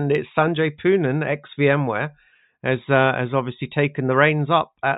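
No technical faults can be heard in this speech.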